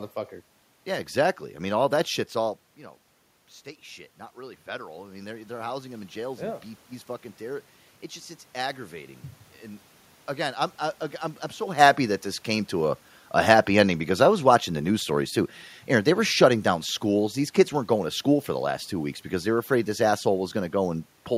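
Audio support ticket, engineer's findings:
Automatic gain rising, 4.33 to 6.58 s. Speech and room noise swell together over about 2.2 s, gain up about 6 dB. Component: AGC stage. Input had dropped about 12 dB; AGC ramping gain up to compensate, lifting the background with the voice. Level shifts near 2.5 s and 11.5 s are talker movement at the mic, not AGC.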